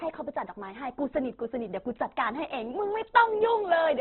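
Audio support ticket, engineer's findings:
Opus compression, likely cause, throughout the speech. Encoder starved of bits in CELT mode; bands refilled by folding and noise rather than dropped. Result: grainy, rough, noisy texture on voiced sound. Bandwidth narrowed to narrowband, nothing above 4.2 kHz, so a muffled, telephone-like top end. Heavy codec damage, consistent with a very low rate, which fits roughly 12 kbps. Little swirl; degradation is steady across the whole clip.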